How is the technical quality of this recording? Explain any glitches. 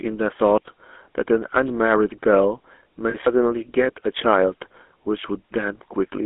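The recording has two clear problems: plainly audible GSM coding damage throughout and a brief dropout glitch a little after three seconds.

The GSM full-rate codec is present for the whole clip. It rebuilds the speech from a vocal-tract model driven by a sparse, regularly spaced pulse train, at a rate that fits the original 13 kbps GSM standard. The line band runs only from about 250 Hz to 3.5 kHz, so the audio is thin and muffled, with a plainly audible buzzy, gravelly roughness.

Lost GSM frames occur from 3.10 to 3.15 s. When the decoder received no usable data, it reused the parameters of the last good frame to fill the gap, which sounds like roughly 40 ms missing, or a couple of frames. Over that span the speech freezes into a short, rough, metallic ring before the normal signal resumes. The gap is too brief to fade fully to silence.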